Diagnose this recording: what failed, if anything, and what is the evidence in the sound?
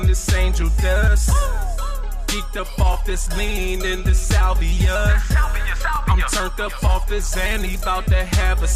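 Overlapping chunks in the buffer or chunked-processing stage. You get a little stutter-click at 2.93 to 2.96 s and again at 5.96 to 5.98 s, three seconds apart. Each new 3 s chunk starts early, so about 21 ms of audio plays twice at every join.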